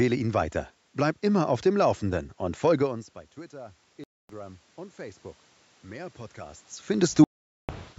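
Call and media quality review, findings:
Automatic gain rising, 2.08–5.28 s, just after "immer auf dem": input level falls by about 21 dB, and the AGC gradually adds about 5 dB. Voice and room noise swell together, unlike the talker movement near 3 s, where only the voice changes.

Bluetooth dropout, 4.04–4.30 s (256 ms) and 7.24–7.69 s (448 ms): silent holes where the sound resumes further on, with no pause in the content. The likely cause is packets lost on the headphone link. The gap lengths fit roughly 12 and 21 lost packets.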